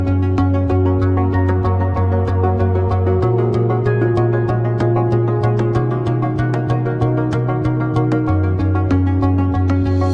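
No technical faults can be heard in this audio. Nothing in the sound points to a problem with how it was captured, processed or delivered.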